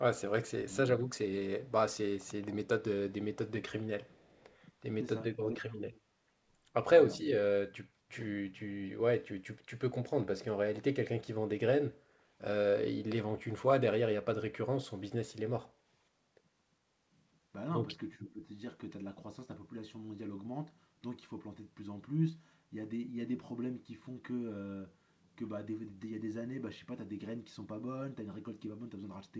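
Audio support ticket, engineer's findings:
Echo leak, 4.04 to 4.57 s: faint delayed copy of the talker trailing the live signal by 412 ms, about 35 dB below the speech. Likely far-end loudspeaker pickup that the echo canceller failed to fully subtract, returned down the line.

Speech suppressed in double talk, 5.34 to 5.92 s: near-end speech pumps down while the other side talks, deepest dip around 30 dB, roughly 400 ms affected in total. AEC/suppressor likely misread local talker as echo and attenuated both.

Speech suppressed in double talk, 18.17 to 18.45 s: milder repeat, dip around 10 dB, roughly 300 ms affected. Likely same overlap mechanism, shallower gating. The G.722 band limit, with nothing above 8 kHz, applies throughout.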